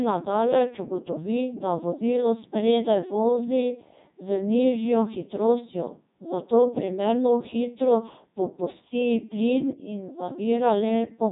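From start to finish the speech passes through a Codec 2 vocoder. The waveform is not kept. Pitch, voicing and envelope are resynthesised from sine waves, so the voice sounds robotic and buzzy, which fits a 3.2 kbit/s mode. Nothing survives above 3.8 kHz.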